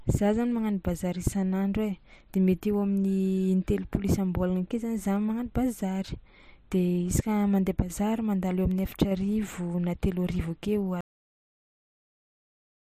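At 11.01 s the speech stops abruptly in a cut-off end: the final buffers were never written or played, leaving about 1.8 s of digital silence. Unlike a fade-out or natural pause, the sound breaks off mid-utterance with no decay or room tail.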